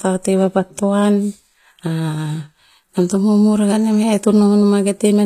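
HE-AAC compression, likely, throughout: the treble sounds rebuilt from copied lower bands rather than coded, so s sounds turn gritty and metallic, with nothing above 14.9 kHz, which fits a bitrate near 24 kbps.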